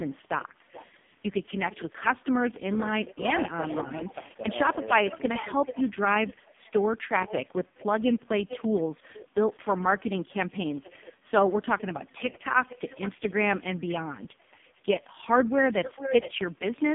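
A speech recording carried over an AMR narrowband mobile codec link shows heavy codec damage from start to finish. The line passes roughly 150 Hz to 3.5 kHz, with nothing above 3.5 kHz, so sibilants and consonant detail are gone. The voice has the buzzy, synthetic quality of a vocal-tract model driven by very few excitation pulses per frame, which fits the lowest AMR-NB mode at 4.75 kbps. Echo leak appears in four stretches: 0 to 0.89 s, 8.4 to 11.16 s, 11.78 to 14.82 s and 15.71 to 16.84 s. In each, a delayed copy of the far-end voice follows the original by about 427, 440, 445 and 449 ms respectively, with the delay creeping slightly longer over the clip. In the first three stretches the copy sits about 20 dB below the main speech as a faint trailing shadow. In the last it is only about 5 dB down and nearly as prominent as the talker. This is likely residual loudspeaker pickup that the echo canceller failed to remove. 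A brief case of speech suppressed in double talk occurs at 3.13 to 3.21 s. The talker's level drops by roughly 15 dB for around 70 ms, producing a short dip or gap. This is likely the canceller attenuating the near-end voice while both sides were talking at once.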